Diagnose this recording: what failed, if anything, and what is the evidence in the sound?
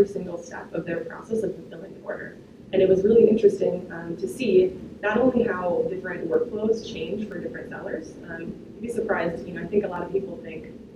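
Six isolated sharp clicks at 0.98, 3.83, 6.34, 7.32, 8.83 and 9.96 s point to dropped samples, likely at the driver or buffer stage. A fraction of a millisecond goes missing and the waveform jumps. Unlike a dropout, no gap is heard.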